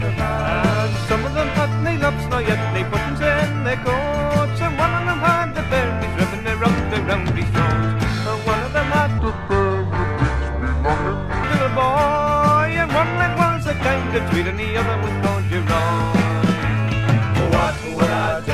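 From 9.18 to 11.43 s there's a wrong sample rate fault: everything drops about 7 semitones and runs at two-thirds speed, sluggish and low together. That ratio fits 48 kHz material played back at 32 kHz with no conversion.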